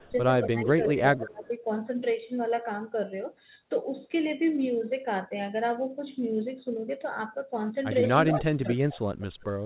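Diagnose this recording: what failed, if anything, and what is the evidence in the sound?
The speech dips sharply in three places: briefly at 0.00 to 0.07 s, through most of 0.42 to 1.44 s, and for most of 8.33 to 8.99 s. The drops reach about 15, 20 and 25 dB. This is speech suppressed in double talk at the call-processing stage, likely because both ends talked at once and the echo canceller, unable to separate the near talker from loudspeaker echo, attenuated everything.

Short repeats of the speech arrive about 156 to 162 ms behind the original at 0.86–0.92, 1.21–1.29, 8.27–8.32, 8.63–8.68 and 9.20–9.25 s. The first is only about 5 dB below the speech and the last ones fade to about 25 to 30 dB down. This is echo leak in call processing, likely from a far end playing the call on a loudspeaker whose echo canceller let part of its microphone pickup return. The scraps carry the G.711 A-law path's band limit, with nothing above 4 kHz.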